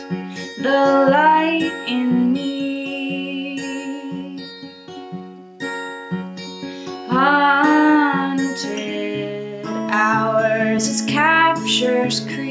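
Gain pumping runs through the whole recording. The level swings by about 5 dB. Loud and quiet passages sit closer together than they should, so the sound feels squashed. The likely cause is input gain set far too high, with a fast limiter or compressor clamping down on each peak. The call microphone processing leaves nothing above 8 kHz.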